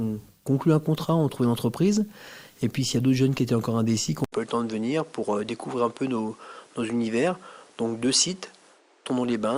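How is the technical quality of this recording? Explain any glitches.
The recording has one glitch. At 4.24 s the input switched to a poorer device, likely another microphone: after an 80 ms gap, the sound turns duller, cut above 10.8 kHz, quieter, with new background noise.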